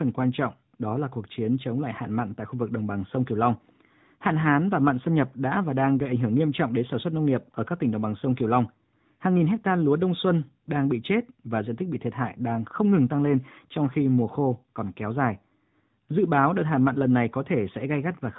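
From start to finish the speech is carried by the AMR narrowband mobile codec, which rebuilds the voice from a vocal-tract model excited by sparse pulses. Everything above 4 kHz is gone, and the plainly audible buzzy, synthetic edge fits a mid-range bitrate near 10.2 kbps. On a spectrogram the energy stops at a flat ceiling at 4 kHz.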